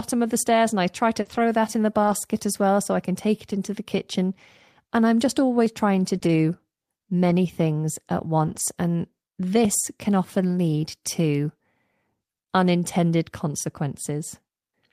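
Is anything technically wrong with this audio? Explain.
Yes, this speech clip has three kinds of technical fault.

Short concealed packet loss, at 1.21–1.27 s and 6.19–6.23 s: about 40 ms and then 20 ms of audio arrived too late to decode. The receiver extended the preceding sound to fill each gap and then faded back into the real signal. The result is a brief smear or wobble in the speech.

Lost packet rebuilt from error correction, at 1.25–1.39 s, 2.03–2.13 s, 3.51–3.53 s, 6.15–6.17 s, 6.23–6.29 s, 7.29–7.31 s and 8.47–8.61 s: each lost stretch, between 20 and 80 ms long, was replaced by the low-bitrate backup copy carried in the following packet. Nothing drops out, but these moments sound rougher and noisier.

Audio missing between chunks, at 5.66 s, 9.65 s and 13.64 s: a tiny skip of roughly 15 ms recurs every 4 seconds, with the two sides butted together. That regular spacing points to the likely cause, a recorder or processor losing a sliver of audio at each chunk boundary.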